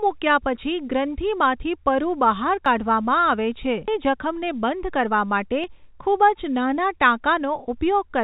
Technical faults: audio missing between chunks; skip ahead; jitter buffer speed-up

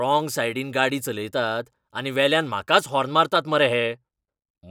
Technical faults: channel delay (comb filtering)

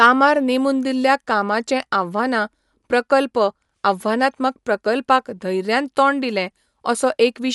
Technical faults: Dolby Digital compression

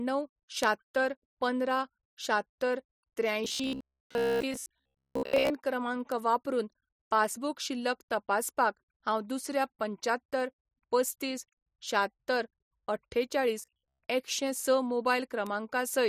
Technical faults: bit error spike; robotic sound from repeated short buffers

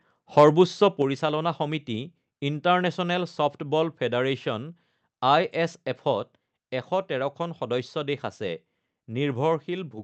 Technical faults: microphone overload; microphone volume stepped down

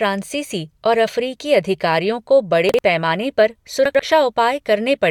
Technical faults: chunks out of order

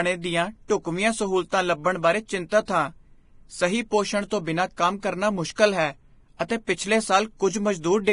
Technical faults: Vorbis compression; pre-echo

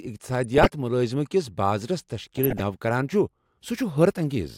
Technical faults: DAB burbling

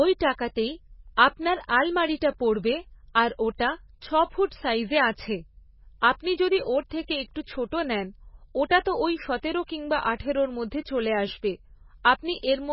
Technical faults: MP3 compression

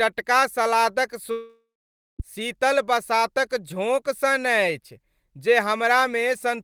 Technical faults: long network dropout

